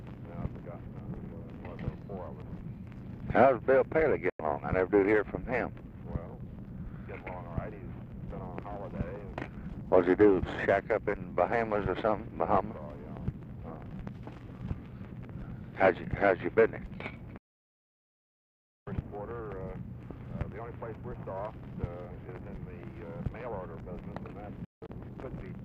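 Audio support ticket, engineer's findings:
Digital broadcast dropout at 4.30 s (about 0.1 s hole), 17.38–18.87 s (1.5 s silence), 24.65–24.89 s (several short holes, longest about 0.17 s). Receiver mutes on lost or checksum-failed frames with a 3 ms fade. Gap lengths fit 24 ms frames. Sound sent during the holes is lost.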